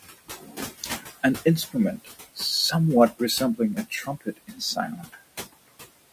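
Speech with room noise underneath, about 15 dB below the voice. Noise suppressor artifacts run throughout. The background is pulled down by about 18 dB between phrases. There is also speech cut by the noise suppressor. From 0.18 to 1.07 s and 3.76 to 5.21 s, the suppressor mistakes quieter speech for noise. It swallows roughly 0.7 s in each stretch, with drops of about 19 dB and 18 dB.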